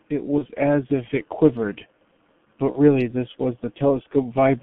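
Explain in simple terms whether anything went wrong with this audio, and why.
The speech sounds muffled, hoarse and dull throughout, with smeared consonants and nothing bright above about 3.4 kHz. That comes from the G.723.1 codec, an old internet-telephony speech coder that squeezes the voice into very little data and rebuilds it only roughly, with heavy damage here.

Twice, at 0.38 to 0.45 s and 2.72 to 2.79 s, the voice briefly turns buzzy or noisy and fades before recovering. This is VoIP packet loss concealed by the speech codec: about 30 ms of sound went missing each time, and the decoder filled the gap by stretching what it had just heard.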